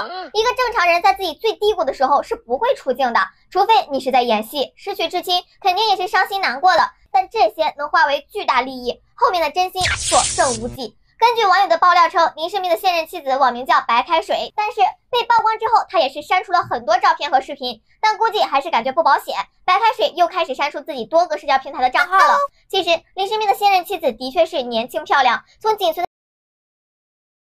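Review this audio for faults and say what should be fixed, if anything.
The clip has a cut-off end at 26.05 s. The sound stops mid-event and drops straight to digital silence, with no natural decay. The silence runs to the end, about 1.5 s. The final buffers were never written, so the tail is missing. Flush and write every remaining buffer before closing the file or stream.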